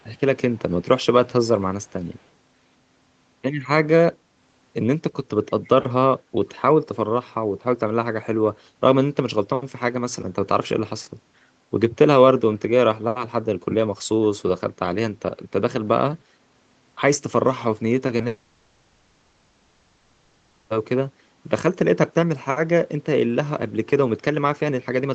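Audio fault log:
0.00–0.05, 0.53–0.85, 1.41–2.29 and 5.64–5.69 s, echo leak: a faint delayed copy of the speech trails it by about 103 ms, sitting about 30 to 40 dB down. It's likely a far-end loudspeaker feeding its mic, with the echo canceller letting scraps slip back.
18.07–18.11, 18.17–18.21 and 18.21–18.25 s, short concealed packet loss: three quick 20 ms holes, each patched by stretching the last bit of sound, so you get a brief smear or wobble rather than a clean gap, and tiny sounds can get swallowed.
18.27–20.69 s, long network dropout: about 2.4 s of audio likely never arrived over the network. The receiver fills the whole gap by carrying the last sound on as a fading buzz or hiss, never quite silent. When the speech resumes, the missing stretch is simply gone.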